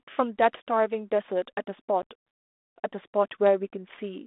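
At 2.02 s there is packet loss on an ADPCM call. A gap of about 10 ms, roughly a single packet, drops out of the speech and is filled with silence. The hole has hard edges. The decoder's adaptive predictor and step size lose track of the sender's during the gap. When the speech returns, it comes back with some distortion. It settles within tens of milliseconds, on a 32 kbit/s G.726 line.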